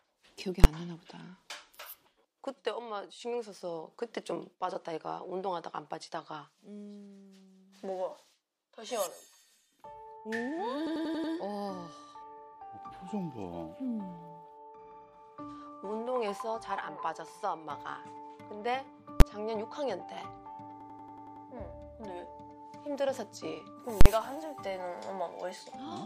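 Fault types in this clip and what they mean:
invalid numbers at full scale: At 0.64 s and 19.20 s there is a single hard bang, each lasting about 11.6 ms, which fits a 512-sample processing block. At 24.01 to 24.06 s the longer 46.4 ms stretch, consistent with a 2048-sample block, gives a loud pop at each edge with nothing between. A calculation went infinite or invalid, and those values were forced to the largest possible sample value for the whole block.
system hang loop: From 10.87 to 11.33 s and again from 20.81 to 21.46 s, the sound turns into a machine-gun stutter. One 92.9 ms fragment repeats exactly at about 10.8 Hz, five times in the first burst and seven in the second. That length fits a 4096-sample ring buffer. The computer or driver stalled while the playback hardware kept re-reading the same buffer until the system recovered.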